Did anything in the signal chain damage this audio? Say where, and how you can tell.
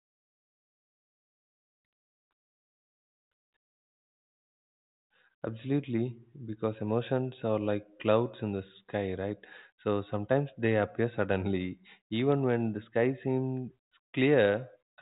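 No, nothing in the signal chain damaged this audio.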